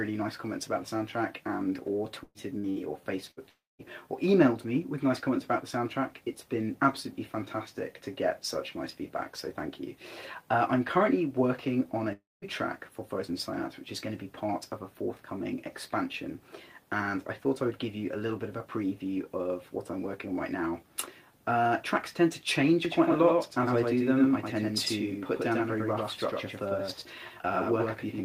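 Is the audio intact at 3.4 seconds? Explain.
No. At 3.4 seconds the audio is in the middle of a burst of packet loss running from 3.31 to 3.40 s. A short run of packets never arrived in time, so the receiver continued the last sound it had for about 60 ms, turning it down as it went. That fill is a brief fading buzz or hiss. The sound then resumes with about 60 ms of material skipped. Because the gap is this short, the fill never reaches silence, and that is what separates it from a longer dropout.

That longer dropout follows at 3.49 to 3.82 s, likely a network outage in which nothing arrived for about 0.3 s. The receiver again extends the last sound, but this time the fade runs its course and leaves about 0.21 s of silence before the audio returns, with roughly 300 ms of material gone. That stretch of dead air after the fading buzz or hiss is the sign of a long network dropout rather than another short burst.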